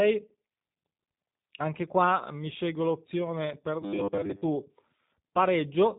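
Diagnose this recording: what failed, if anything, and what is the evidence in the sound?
The codec stage failed: a G.729 codec runs throughout, giving the speech a plainly rough, synthetic edge. A spectrogram shows a hard ceiling at 3.8 kHz with nothing above it and smeared formant detail. This points to 8 kbit/s coding that rebuilds speech from a filter and a few pulses per frame.

From 3.82 to 4.42 s the speech collapses into a rigid, metallic 100 Hz buzz, which is robotic sound from repeated short buffers. The likely cause is a starved buffer looping its last 10 ms while most of the real audio there is skipped. The waveform shows identical 10 ms cycles, and the spectrogram shows flat harmonic stripes at multiples of 100 Hz.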